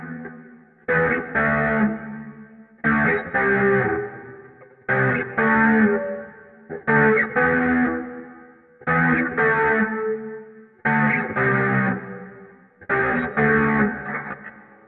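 No technical faults can be heard anywhere in this recording of sounds. Nothing in the audio points to a problem in how it was captured, processed or played back.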